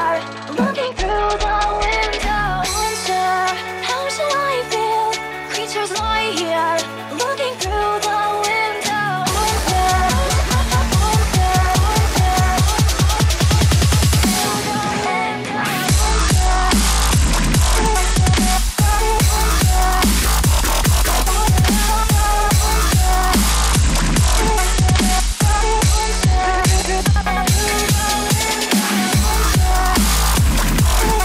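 Audio dulls and turns gritty at 0.82–1.95 s, 15.85–18.53 s and 23.50–27.24 s: a Bluetooth SBC bit pool drop. Unlike fixed band-limiting, the treble then recovers.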